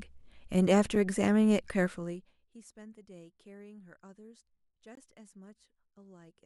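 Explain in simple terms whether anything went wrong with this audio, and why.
A couple of things went wrong. There's a gap between stream segments at 0.95 s and again from 4.95 to 4.97 s: tiny hard-edged holes of silence, four seconds apart, which fits 4-second segments not lining up. From 1.83 to 2.6 s you get zipper noise: the speech level drops steeply in about 70 little steps a second, so it ticks instead of gliding down like a fader would.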